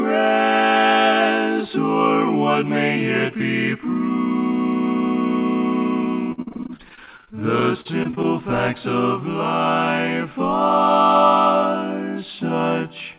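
Repeated packet loss (robotic sound) from 6.32 to 8.26 s: twenty short dropouts, the longest 57 ms, are patched by stretching the preceding sound, leaving roughly a quarter of the stretch choppy.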